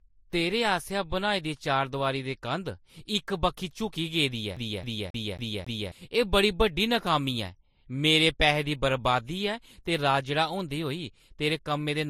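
Transcoding between lossy codecs runs through the whole speech clip, from start to finish. Nothing is heard above about 16.6 kHz, and two kinds of coding damage sit on top of each other and are heard together. That layering is likely the result of one lossy encode being re-encoded by another, the sound pointing to a low-bitrate MP3 followed by an even lower-bitrate Vorbis pass. The second encoder wastes bits reproducing the first one's artefacts while adding its own.

A CD stuck on one turn appears from 4.56 to 5.92 s. A scratch keeps throwing the laser back to the same point on the disc, so a 0.27 s slice of speech repeats five times, with a brief mute at every jump. The result is a rapid, perfectly regular stutter, the unmistakable hiccup of a skipping CD, before playback moves on.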